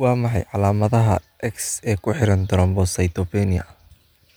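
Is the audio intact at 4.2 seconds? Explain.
Yes, at 4.2 seconds the audio is intact, with no dropout, glitch or other fault at that moment.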